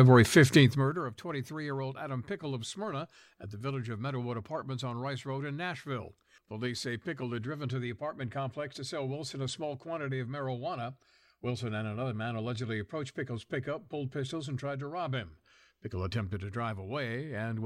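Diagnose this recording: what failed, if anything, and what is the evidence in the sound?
Zipper noise from 0.59 to 1.06 s: a roughly 15 dB drop applied in 1 dB steps, about forty a second, so each jump ticks audibly.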